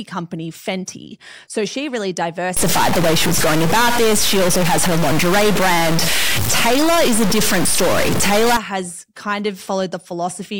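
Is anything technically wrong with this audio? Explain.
Yes. From 2.57 to 8.57 s the speech turns harsh and buzzy, with noise filling the pauses, which is likely a stuck bit. One fairly high bit, worth roughly -10 dBFS, seems pinned, so about half the samples jump by that amount, following the waveform and flipping around zero.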